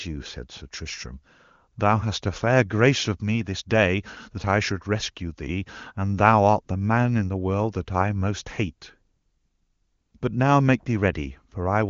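Nothing stood out on listening to this speech, which comes through the AMR wideband (HD Voice) codec at its top rate of 23.85 kbit/s.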